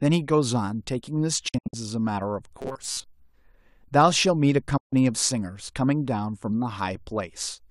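Speech clip in which the sound twice cuts out briefly, fading to silence in about 8 ms each time. From 1.48 to 1.74 s it breaks into several short holes totalling 168 ms over about 240 ms, the longest 72 ms. From 4.77 to 4.93 s there is a single 144 ms gap. This is a digital broadcast dropout: the receiver muted while frames were lost or corrupt, which fits roughly seven and then six lost frames. That audio is gone. Between 2.60 and 3.04 s the speech turns into a rigid, metallic buzz that only roughly follows the words, with a fixed pitch of 133 Hz. This robotic sound from repeated short buffers is likely caused by audio arriving too slowly, so the playback keeps repeating its last fragment of about 7.5 ms, the period of a 133 Hz tone. Around half of this stretch is repeated material in place of real speech.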